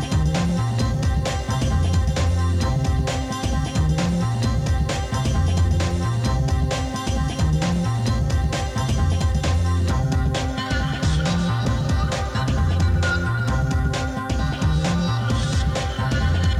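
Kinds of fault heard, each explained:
Compressed frames skipped: at 11.64 s, a couple of whole frames of the encoded stream never reach the output, because they were either missing from the file or rejected by the decoder as damaged. The audio jumps forward by around 50 ms, and the material in that gap is simply lost. What you hear is the sound lurching ahead at that point.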